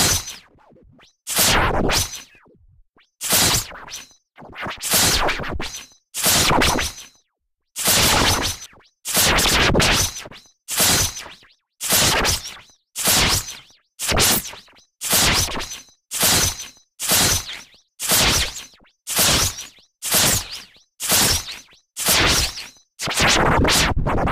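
Doubled audio track, 6.62 to 8.66 s: a second, undecayed copy trails roughly 150 ms behind at about 5 dB lower, likely from a slower capture path, starting and stopping abruptly.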